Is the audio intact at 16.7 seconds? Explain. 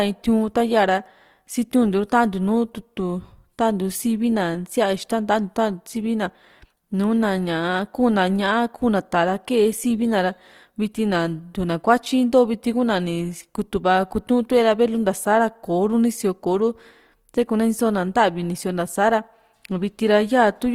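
No. At 16.7 seconds, as throughout the clip, the speech sounds rough and grainy, with a noisy, fizzy texture where it should be clean. This is likely Opus compression in its music mode at a low bitrate, which fits roughly 24 kbps, filling starved bands with noise or folded copies of lower ones.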